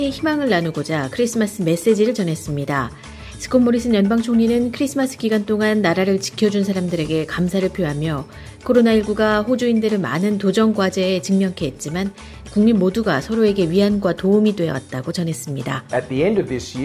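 Nothing technically wrong can be heard anywhere in this audio. The sound holds steady throughout, with no fault to point to at any time.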